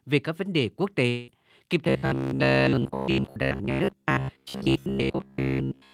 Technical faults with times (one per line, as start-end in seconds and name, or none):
1.09-1.30 long network dropout
1.85-5.94 robotic sound from repeated short buffers